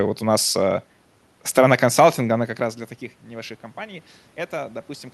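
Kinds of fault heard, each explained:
Automatic gain rising: after the input fell by about 17 dB, the gain control slowly raises its gain from 3.25 s, just after "как раз для таких", to the end. Voice and room noise swell together, so the waveform envelope and spectrogram background brighten steadily.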